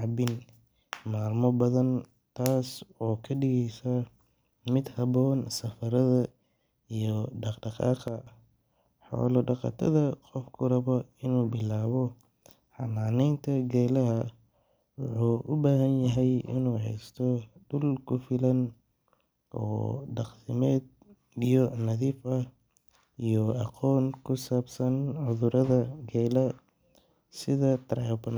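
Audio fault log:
8.08 to 8.27 s, sudden gain jump. The speech and the background noise drop together by about 7 dB, with no fade in or out. The level steps straight down at the start and straight back up at the end. Because both change at once, the cause is in the signal gain and not the talker. The likely cause is a digital gain setting or bit shift applied between one sample and the next, with no ramp.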